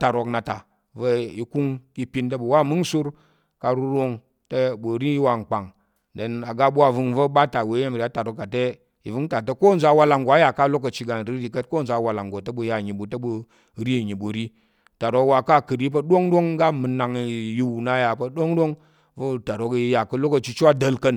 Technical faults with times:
none

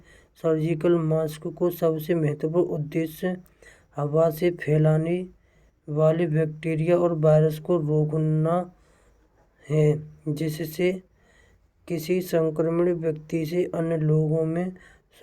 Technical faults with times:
none

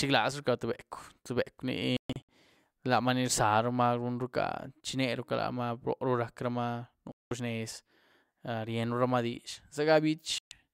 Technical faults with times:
1.97-2.29 digital broadcast dropout
7.12-7.31 digital broadcast dropout
10.38-10.52 digital broadcast dropout

